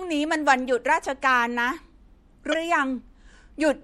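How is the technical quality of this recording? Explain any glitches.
The recording has two clear faults: compression damage throughout, and one short glitch near the end.

Throughout, the speech sounds watery and swirly, with dulled treble and smeared s sounds. The likely cause is MP3 compression at a low bitrate, around 64 kbps.

From 2.50 to 2.54 s there is damaged data in the compressed stream. The decoder misreads corrupted frames and loses sync, producing a brief blip or squawk.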